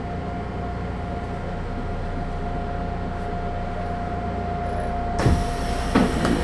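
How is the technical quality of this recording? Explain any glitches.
The technical quality of the recording is sound, with no glitches to explain.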